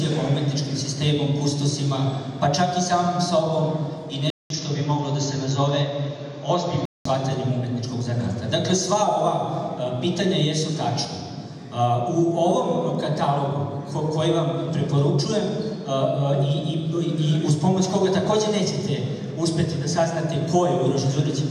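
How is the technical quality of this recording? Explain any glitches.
The recording has one clear glitch. From 4.30 to 7.05 s, after a 200 ms silence, the sound turns dull, losing everything above 7.3 kHz, with new background noise roughly 30 dB down at unchanged level. An input switched to a poorer device is the likely cause. The gap and fresh noise floor separate it from a simple filter.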